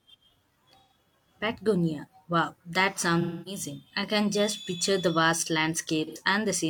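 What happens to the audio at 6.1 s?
Right after "just picture the vast", from 6.07 to 6.18 s, there is AAC frame loss with concealment. About 85 ms went missing, which fits two lost frames, and the decoder rebuilt it from the last good spectrum. The result is a smeared, noisy patch. On a spectrogram the harmonic lines blur into diffuse noise across that span.

Running through that moment as well is a block size mismatch (truncated). Each block's tail is discarded, producing a 46.9 Hz buzz, which fits a 1024-sample block, while speed stays normal. It shows as evenly spaced vertical stripes and waveform jumps every 21 ms.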